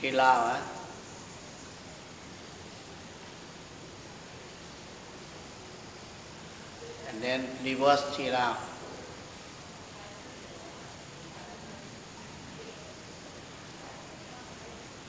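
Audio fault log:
No faults heard anywhere in this audio.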